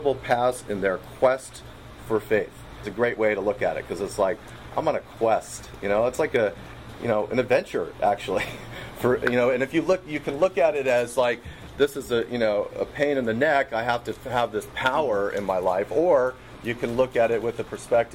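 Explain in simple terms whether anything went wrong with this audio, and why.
A skip ahead happens at 2.83 to 2.85 s. About a second of sound never gets played. It was lost on the way or thrown out when the receiving end's holding area overflowed, so playback jumps straight to later audio with no pause.

Jitter buffer speed-up follows from 2.93 to 3.90 s, at 106% speed, and again from 4.63 to 7.94 s, at 108%. The receiver was holding too much waiting audio, so it trimmed many tiny slices, well under a tenth of a second in the first stretch and roughly a third of a second in the second. That makes the sound run faster and hurried without changing pitch.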